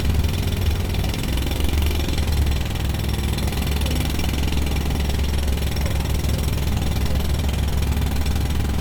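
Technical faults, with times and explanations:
Throughout, transcoding between lossy codecs: the sound carries two layers of coding artefacts at once, the different artefacts of the two codecs heard together, while content still reaches about 20.1 kHz. The likely cause is a chain of a Vorbis encode at a rate that fits about 77 kbit/s followed by Opus at about 48 kbit/s, with the second codec spending its bits on the first one's damage and adding its own.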